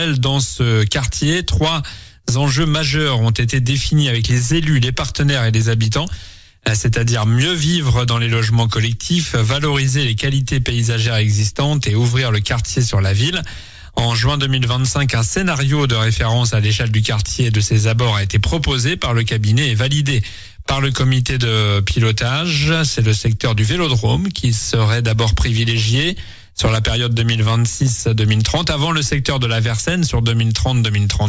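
No technical faults can be heard anywhere in this audio.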